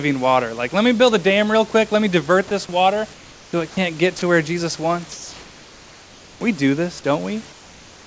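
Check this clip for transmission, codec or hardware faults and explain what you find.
Two faults from discontinuous transmission turn up in this speech, three stretches of comfort noise and one short clip by the voice detector. The call audio stops at 8 kHz, which fits a G.722 wideband codec.

Comfort noise in place of the background: At 3.14–3.53 s, between "me divert this water" and "it can't get", at 5.12–6.41 s, and from 7.52 s after "do this" to the end, the room's textured background, about 26 to 27 dB below the speech, becomes a flat, featureless hiss. The hiss is about 4, 2 and 3 dB quieter respectively. The likely cause is the sender pausing transmission during silence while the receiver synthesises noise roughly matched to the background.

Sound dropped by the voice detector: At 4.19–4.22 s, just after "it can't get", a 30 ms sliver of speech is swapped for comfort noise, so the sound is clipped briefly. 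The detector likely misjudged this quiet moment as background and stopped sending until it triggered again.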